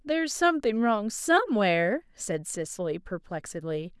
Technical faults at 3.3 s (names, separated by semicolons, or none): none